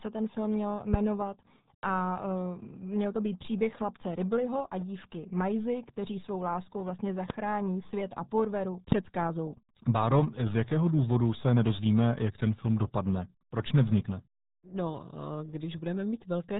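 RealAudio 14.4 codec damage runs through the whole of this speech clip, from start to finish. The speech carries the heavy, gargly smearing of a very low-rate speech coder, which fits an 8 kbit/s RealAudio 1 stream built for dial-up modems. Nothing above 3.8 kHz survives, so consonants lose their crispness and the voice sounds muffled, while the coarse modelling of each short frame leaves a bubbling, watery texture on vowels.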